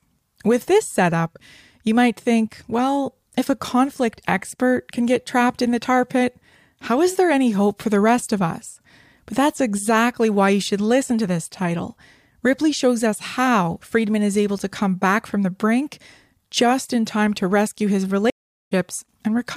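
A stream reconnect occurs from 18.3 to 18.72 s, right after "time to rescue his". The connection dropped, so the player went quiet for about 0.38 s, re-established the link and started a new decoder partway through the live stream. Because playback picks up from where the stream has moved on to, the speech returns roughly 0.4 s further along, and a short stretch of speech is skipped across the gap.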